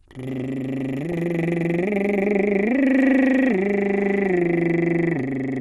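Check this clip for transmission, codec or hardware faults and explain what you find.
There are two faults in this music clip, both tied to an MPEG Layer II chain.

Throughout, the sound is dull and carries a gurgling, grainy edge, and the top end keeps flickering in and out. That's MP2 compression, and the damage is plainly audible. The codec divides the signal into 32 sub-bands and shares out bits among them. At a low rate it runs short, so upper bands get dropped and the survivors are quantised coarsely. The character points to roughly 80 kbps, likely a starved bit budget.

From 1.12 to 1.17 s there's a short burst of DAB burbling. Here bit errors from weak reception slipped past the error correction into the MP2 data. Corrupted samples put short blips of noise into single sub-bands, and corrupted scale factors, where they get through, make sub-bands jump in level for up to a frame. The burst is only about 56 ms long, which fits a handful of damaged frames at a low error rate.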